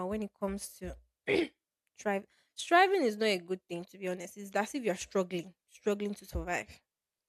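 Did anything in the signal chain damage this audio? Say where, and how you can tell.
No, nothing in this speech recording stood out as damage from any stage of the signal chain when I listened to it.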